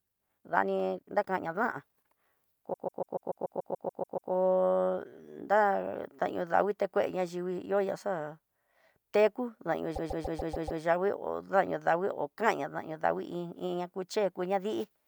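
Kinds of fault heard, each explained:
time-stretched section: From 0.00 to 2.26 s the speech runs about 1.57 times too fast, yet its pitch stays put, so it sounds hurried. This is likely software squeezing the passage to a shorter length by dropping tiny slices.
repeated frames: From 2.73 to 4.31 s, a 144 ms block of speech plays eleven extra times, and from 9.95 to 10.81 s six extra times. The stutters add 1.58 s and 0.86 s respectively.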